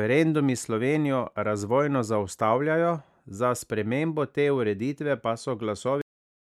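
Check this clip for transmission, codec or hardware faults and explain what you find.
There is one fault, a cut-off end. At about 6.02 s the speech stops abruptly in the middle of a sound and falls straight to digital silence with no natural decay. The silence lasts to the end, around 0.43 s. The final stretch of audio was never written out or played back, so the recording simply halts. The last buffers were lost before they reached the file or the output, leaving the sound truncated rather than finished.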